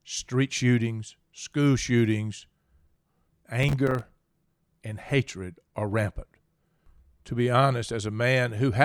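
From 3.63 to 4.10 s, the speech breaks into processor overload crackle. The system could not finish its small audio buffers in time, and it missed many deadlines again and again. Each miss drops out as a brief silent gap with hard edges. The gaps look to be a few milliseconds each, and around ten of them fall inside this stretch. Together they make a gritty, tearing crackle over the speech. It stops at 4.10 s.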